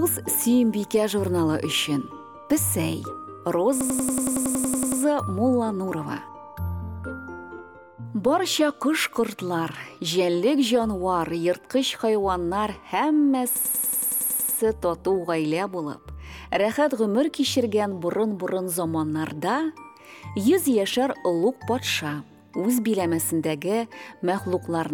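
A system hang loop occurs twice, at 3.81 to 5.02 s and again at 13.56 to 14.58 s. Each time the system froze while the sound hardware kept replaying the same 93 ms ring buffer, which fits a 4096-sample buffer. The first hang repeats that fragment 13 times and the second 11 times, producing a machine-gun stutter at about 10.8 Hz.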